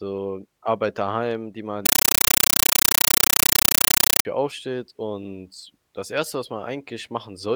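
From 1.86 s, right after "daheim die man", the speech gives way to very loud, chattering static until 4.25 s, when it returns at "aufsteht und das". The racket is a stream of 8 ms noise bursts repeating 31.25 times a second. This is a compressed stream played as audio: an undecoded AC-3 bitstream, likely at 384 kbps, was passed through as if it were ordinary samples, so each coded frame sounds as noise and then silent padding.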